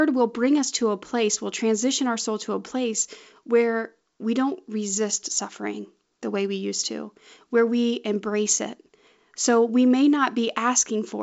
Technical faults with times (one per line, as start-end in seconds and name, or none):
none